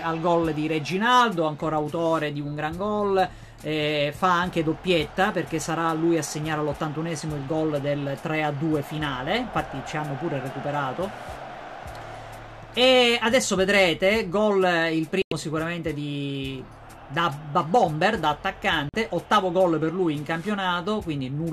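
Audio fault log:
15.22 s and 18.89 s, digital broadcast dropout: the receiver lost valid frames and muted, cutting the sound to silence for about 0.1 s, then 0.05 s.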